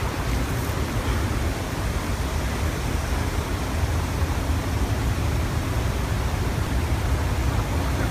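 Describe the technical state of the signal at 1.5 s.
Right around there, at 1.47 s, there's a spot of damaged data in a compressed stream. It's a single, near-instant event. Some of the encoded bytes at that point are wrong, so the decoder can't make sense of the frame it's reading. It loses sync and has to hunt for the next valid frame header before it can carry on. What you hear is a chirp, squawk, click or short hole.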